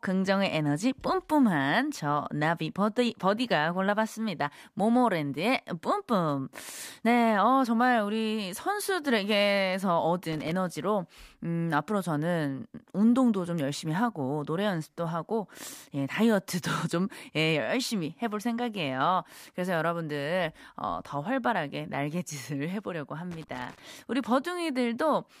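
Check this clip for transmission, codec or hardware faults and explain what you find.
There is one hardware fault, loose connector crackle, at 10.33–10.52 s and 23.31–23.79 s. A worn contact is making and breaking, chopping the speech into an irregular scratchy burst. On a waveform this shows as jagged dropouts and spikes, and on a spectrogram as ragged broadband vertical streaks.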